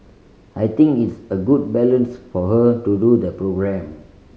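No technical faults can be heard anywhere in the speech recording, and the signal stays continuous and steady throughout.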